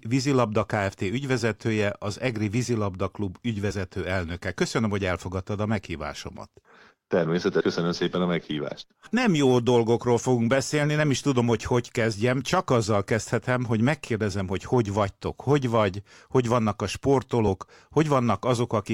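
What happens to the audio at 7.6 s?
At 7.59 to 7.61 s, compressed frames are skipped: the decoder never plays a short run of encoded frames, so the speech jumps ahead. The frames appear to be about 26.1 ms long, and around three of them, roughly 70 ms of audio, go missing. Unlike a dropout, there is no silent gap.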